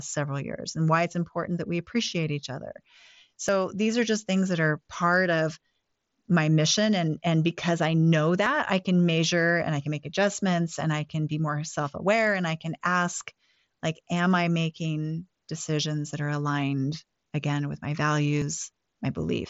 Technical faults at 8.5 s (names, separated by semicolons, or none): audio missing between chunks